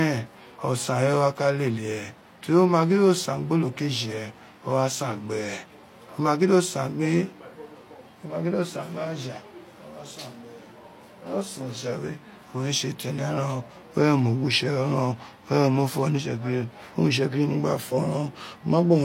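Low-bitrate audio saved at a high bitrate runs throughout the speech. Nothing sounds above 16.3 kHz, and artefacts from a heavy first encoding remain. This likely came from a low-bitrate HE-AAC file re-saved as high-bitrate MP3, which cannot restore what was removed.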